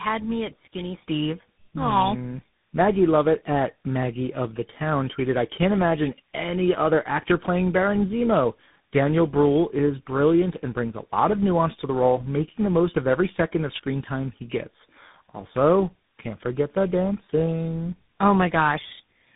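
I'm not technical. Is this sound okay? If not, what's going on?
No. The whole clip suffers from tandem speech coding: the call went through three phone speech compressors in a row, each squeezing what the last had already damaged. So the speech sounds rough, muffled and warbly, with nothing above 3.8 kHz.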